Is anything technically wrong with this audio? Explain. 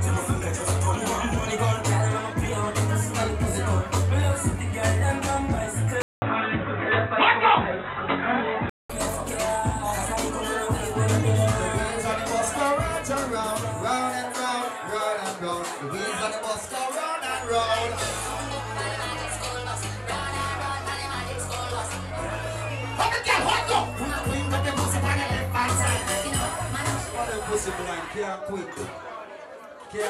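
Yes. From 6.02 to 8.9 s the sound turns dull and boxy, with a short gap of about 200 ms at the switch. This is most likely an input switched to a poorer device. A lower-grade input passes almost nothing above 3.9 kHz and adds its own faint background noise, roughly 35 dB under the signal, while loudness stays about the same. On a spectrogram the upper band goes dark during that stretch, with a blank vertical strip at the switch. The waveform shows a brief flat line but no change in overall size.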